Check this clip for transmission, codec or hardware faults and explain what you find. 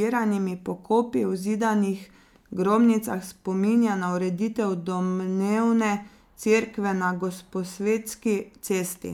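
Nothing stood out on listening to this speech recording.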